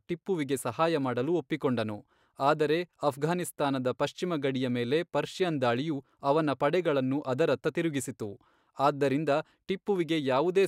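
Speech recording, no technical faults found anywhere in the clip.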